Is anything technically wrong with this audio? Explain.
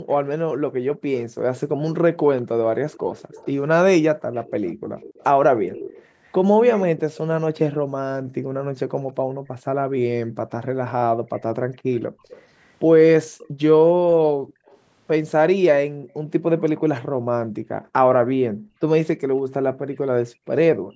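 Yes, there are two problems, both typical of a speakerphone call.

Background gated by the echo canceller: between 0.02 and 1.42 s, 4.18 and 4.95 s, 7.77 and 12.23 s, and 14.32 and 20.49 s, the room tone keeps ducking, by as much as about 40 dB. The canceller is clamping the microphone hard while the far-end loudspeaker plays, then releasing.

Echo leak: from 0.1 to 7.75 s and again from 11.36 to 17.02 s, there's a faint copy of the speech trailing about 196 ms behind, about 20 dB down at first and about 25 dB down later. That's likely a loudspeaker echo the canceller didn't fully remove, sent back down the line.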